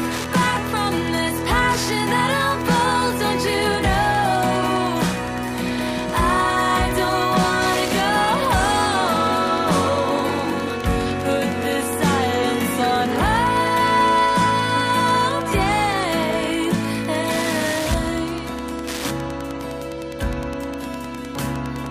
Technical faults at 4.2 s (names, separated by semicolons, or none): Wi-Fi interference